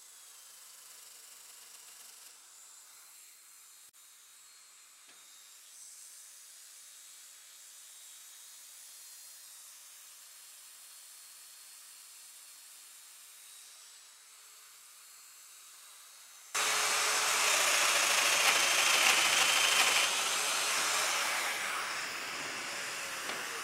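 The audio has one channel inverted from the start to 16.55 s. Summed to mono, everything common to both channels cancels. Centred material and bass nearly disappear. The level drops by about 22 dB. What remains is only the difference between left and right. That leaves a faint residue. The likely cause is reversed polarity on one stereo channel, such as a swapped wire or a flipped phase setting. After 16.55 s, full level returns.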